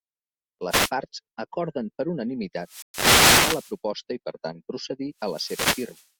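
It's a speech clip with three wireless microphone noise hits and a brief dropout tucked inside one of them. The first hit is a short swish of static from 0.69 to 0.91 s, just before "parts acorden per". A longer one runs from 2.60 to 3.78 s, right after "parts acorden per" and ending before "i per". A third covers the tail from 5.18 to 6.09 s. Each is the analogue FM link fading as reflected copies of the radio signal cancel the direct one, so the receiver's own hiss climbs. Inside that middle burst, from 2.82 to 2.94 s, the output simply cuts out for 120 ms and then picks up again. That's a playback stall. The likely cause is the player running dry of buffered data or its audio thread getting held up. It's heard as a clean gap rather than noise, which sets it apart from the static around it.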